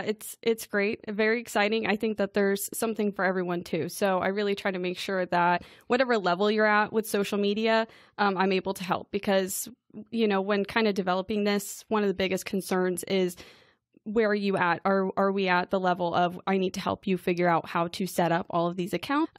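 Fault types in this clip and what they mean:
Damaged data in a compressed stream: some bytes in the encoded speech were lost or overwritten, so the decoder misread those frames, lost sync and had to search for the next valid frame header before playing cleanly again. Each time this leaves a brief glitch lasting only a couple of hundredths of a second, heard at 5.56 to 5.58 s, at 16.66 s, and at 19.24 to 19.26 s, just before the audio ends.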